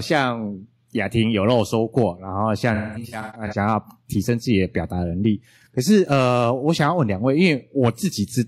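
Speech with AAC frame loss with concealment from 2.74 to 3.57 s: scattered lost frames, the longest run around a fifth of a second, are patched from the last good spectrum, so the sound turns smeared and phasey rather than breaking into the hard silent gaps of a plain dropout.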